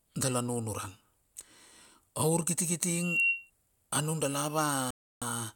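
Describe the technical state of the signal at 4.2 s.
At 4.2 s the speech signal is intact, with no audible fault at that moment.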